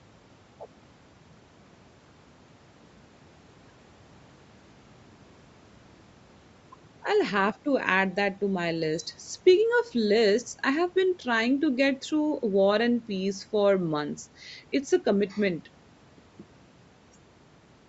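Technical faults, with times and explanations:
Nothing stood out on listening to this speech, which carries the usual trimmed low bass and no content above about 8 kHz from call microphone processing.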